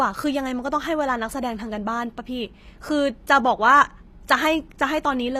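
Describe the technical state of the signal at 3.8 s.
At 3.8 s the speech carries plainly audible damage, present through the whole clip. It is likely HE-AAC compression at a low rate, around 24 kbps. The treble is rebuilt by copying lower bands upward. Sibilants sound gritty and metallic, and nothing reaches above 15.5 kHz.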